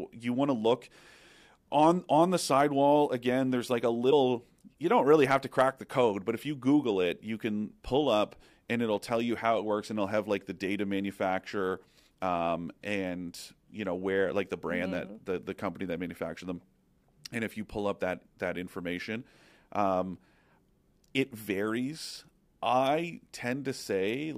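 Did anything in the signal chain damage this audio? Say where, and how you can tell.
Yes, at 4.11 s, just after "like a", there is a brief glitch from damaged data in a compressed stream, so the fault sits at the codec or storage stage rather than in the analogue path. Corrupted bytes reach the decoder, which misreads the affected frame, loses sync and hunts for the next valid header. On a spectrogram it appears as a thin vertical disturbance under 20 ms wide, unrelated to the harmonic structure of the speech around it.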